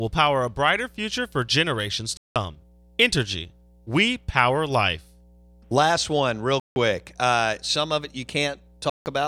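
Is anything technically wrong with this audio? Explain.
Yes, there are two problems.

Throughout the clip there is mains hum. Power-line current is leaking into the signal path, most plausibly through a ground loop or a nearby transformer, and it is being recorded along with the speech. You hear it as a steady low 60 Hz tone sitting about 30 dB below the voice.

There are also three Bluetooth dropouts, at 2.17 to 2.36 s right after "brighter future for generations", at 6.60 to 6.76 s after "one real", and at 8.90 to 9.06 s. Each is likely caused by audio packets failing to reach the headphones in time, so the output goes silent for about 160 to 190 ms. The gaps start and stop within a few milliseconds, and the speech picks up further along, as though it kept playing during the silence.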